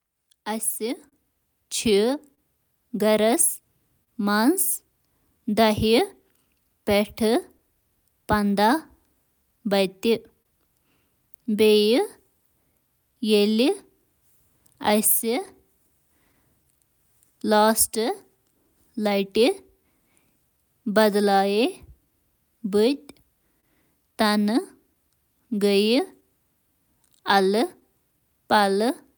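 A speech recording with clock drift between sender and receiver: the sender's clock runs roughly 2% slow, so the receiver's buffer keeps draining rather than overflowing. Repeated timing corrections from 2.10 to 29.08 s stretch and repeat short pieces, adding about 0.4 s in total. This is heard as an unsteady, slightly dragging tempo, not as dropouts. Scattered short gaps between 1.09 and 4.09 s, 7.58 and 10.47 s, and 26.20 and 27.83 s are brief concealed losses of 30 ms at most. They sound like isolated ticks or smears, unlike the continuous tempo wobble. A short stall from a late packet at 23.60–23.65 s holds the sound for 26 ms before it resumes in the same place, so it comes across as one held moment rather than a smear.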